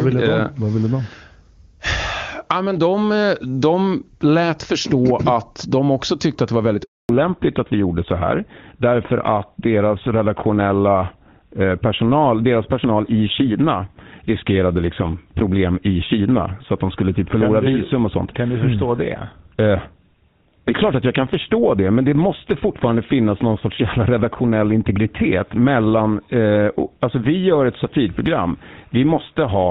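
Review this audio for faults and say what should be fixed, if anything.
At 6.83 s, just after "att det var väldigt", the call is handed from one network to another and no speech frames arrive during the switch. This handover gap cuts the speech off abruptly into 0.26 s of silence until 7.09 s, and whatever was spoken in that window is lost. Using make-before-break handover, so the new link is carrying frames before the old one is released, would prevent this.

From 7.09 s to the end, the same handover brings a fallback to narrowband. The call leaves HD Voice, which before the switch sounds clean and full in a way that fits AMR-WB at 23.85 kbit/s, for an older narrowband codec, likely GSM full rate. Nothing above 4 kHz survives, so the speech turns duller, more muffled and rougher. Making sure the target network supports and renegotiates AMR-WB across the handover would keep the call wideband.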